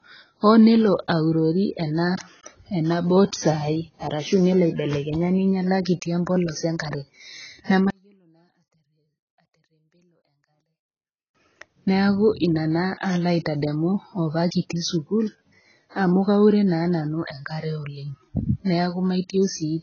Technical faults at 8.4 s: low-bitrate audio saved at a high bitrate; one channel inverted

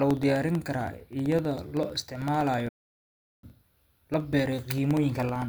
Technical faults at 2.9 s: periodic USB or driver dropouts; playback stall

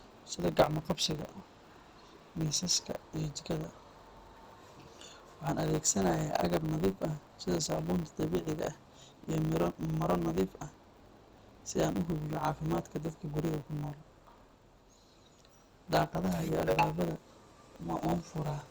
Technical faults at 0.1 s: block size mismatch (truncated)

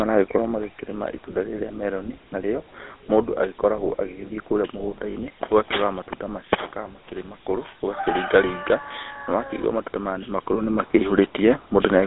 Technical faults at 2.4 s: GSM full-rate codec

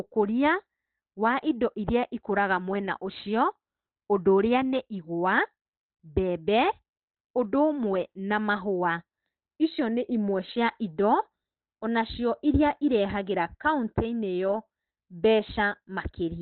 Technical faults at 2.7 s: Opus compression

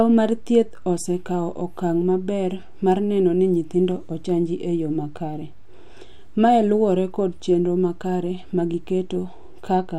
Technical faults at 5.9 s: none

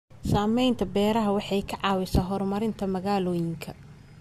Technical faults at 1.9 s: dropped samples

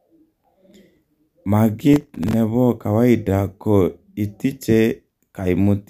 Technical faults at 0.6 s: none

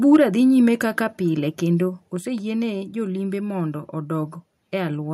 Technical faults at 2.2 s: microphone volume stepped down

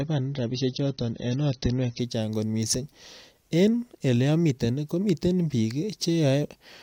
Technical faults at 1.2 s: adaptive stream starting at a low bitrate

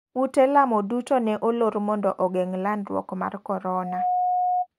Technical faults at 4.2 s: loudspeaker feedback squeal

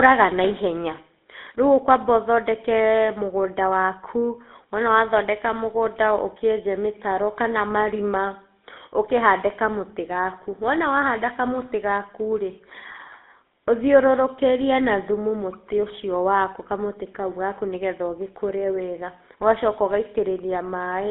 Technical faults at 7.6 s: GSM full-rate codec

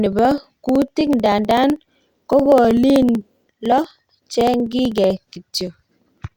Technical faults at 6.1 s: periodic USB or driver dropouts

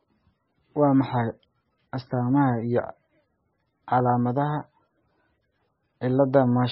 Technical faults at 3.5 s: MP3 compression

